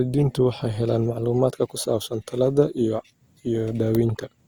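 From 1.06 to 1.94 s speech jumps 5.5% fast and 92 cents sharp, then snaps back, likely a drift correction step, not gradual wow.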